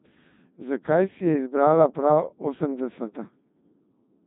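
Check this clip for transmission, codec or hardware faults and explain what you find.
One codec fault runs through the entire speech clip. Codec 2 vocoder damage: the decoder rebuilds the voice from sine waves driven by pitch, voicing and envelope, so the sound is heavily robotic and buzzy, fitting a 2.4 kbit/s mode. A spectrogram shows nothing above 3.7 kHz and overly regular harmonics; the waveform no longer matches natural speech.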